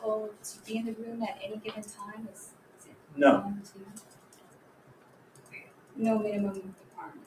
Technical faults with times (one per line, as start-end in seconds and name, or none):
0.00-7.27 noise suppressor applied to music or sounds
0.33-0.65 sound cut by the noise suppressor
2.52-3.11 sound cut by the noise suppressor
4.02-5.95 sound cut by the noise suppressor
6.75-6.97 sound cut by the noise suppressor